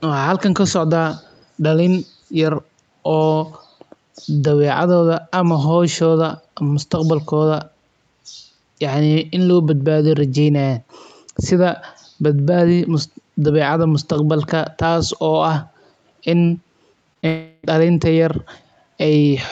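Speech carried over a call, with an 8 kHz upper band limit from the call path. From 1.18 to 1.45 s a very faint copy trails the voice by about 181 ms, likely an echo leak from a loudspeaker the echo canceller missed; the fixed delay separates it from room reverberation. At 17.13–17.17 s and 17.21–17.25 s, short concealed packet loss leaves brief smears about 20 ms long, each blending straight back into real speech. From 17.27 to 17.65 s the sound stretches into a fading buzz for about 360 ms, likely a long network dropout, longer than the blips and followed by speech resuming without the missing part.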